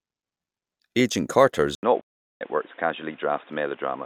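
At 1.75 s the recording likely switched its input to a poorer device, such as a narrower-band microphone or a headset's call profile. After a brief 80 ms gap, the speech turns dull and boxy, with little change in level and new background noise about 30 dB below the speech.

From 2.00 to 2.42 s the player likely ran short of data or had its thread blocked, causing a playback stall. The speech drops out for about 0.39 s, then resumes through the same narrowed, boxy input.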